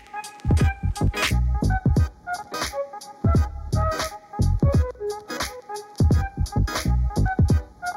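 From 1.31 s to the end, channel delay (comb filtering) sets in: one channel runs a fraction of a millisecond late, and summing to mono cancels evenly spaced frequencies from around 3 kHz upward, leaving a hollow, phasey tone with fixed notches rather than the smooth top-end loss of a low-pass filter.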